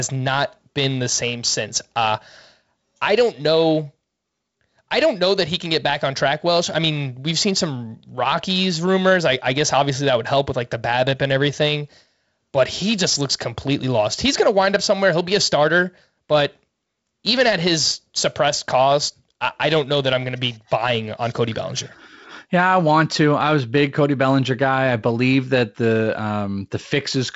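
Speech recording with no technical faults to report.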